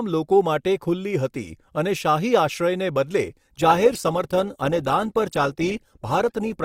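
From 3.29 s to the end, the speech abruptly drops in quality, with codec artefacts rising and no gap at the switch. This is an adaptive stream at a lower bitrate, a step down that fits Opus falling from 64 to 16 kbit/s.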